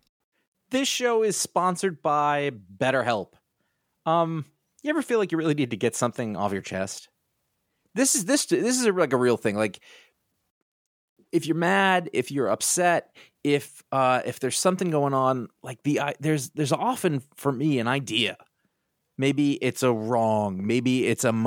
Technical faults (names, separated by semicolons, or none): none